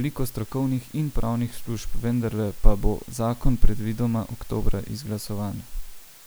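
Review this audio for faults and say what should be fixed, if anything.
The speech was reduced to very low bit depth with dither before rounding, likely 8-bit, leaving a steady, even hiss about 25 dB below the voice throughout, without distortion. Keep at least 16 bits through every processing and export stage.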